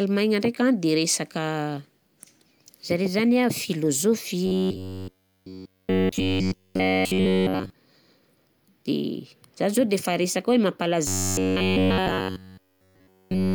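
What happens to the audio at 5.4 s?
At 5.4 s the speech has robotic sound from repeated short buffers, from 4.46 to 7.70 s. A rigid metallic buzz near 94 Hz runs throughout, likely from repeating roughly 11 ms buffers.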